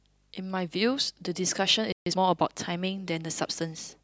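At 1.92 s the speech cuts to silence for about 140 ms, a playback stall, likely the player running dry. From 2.06 to 2.18 s, time-compressed catch-up hurries the speech at twice normal speed, pitch unchanged, unlike a sped-up resample.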